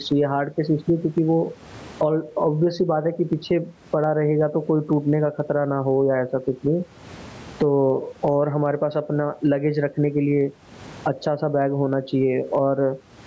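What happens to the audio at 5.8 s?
Gain pumping is audible at 5.8 s, as it is throughout the clip. The sound likely passes through input gain set far too high, with a fast limiter or compressor clamping down on every loud syllable. The level swings by roughly 25 dB. The room noise sits about 42 dB below the speech, and the speech is left squashed.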